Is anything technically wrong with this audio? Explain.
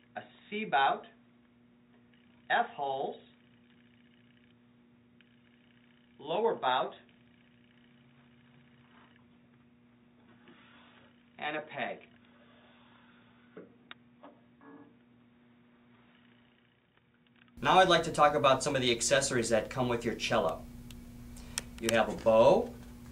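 Yes. From the start to 17.57 s, the audio is band-limited, with nothing above 3.8 kHz, so it sounds dull and boxy. Its level sits around 5 dB lower, over a faint background noise floor well below the signal. At 17.57 s it abruptly clears up to full bandwidth and level, with no gap at the transition. This pattern points to an input switched to a poorer device. The likely cause is that capture ran on a narrowband microphone or headset call profile before moving to the better input.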